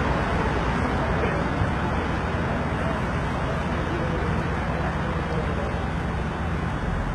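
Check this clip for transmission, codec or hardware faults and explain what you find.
One codec fault is audible, and it runs through the whole clip. From start to finish the treble sounds synthetic and gritty, with nothing above 11.8 kHz. That points to heavy HE-AAC compression, likely at a low bitrate around 16 kbps: the upper band is rebuilt by copying lower content upward under a coarse envelope, so its harmonics fail to line up with the real lower spectrum and bright detail turns metallic.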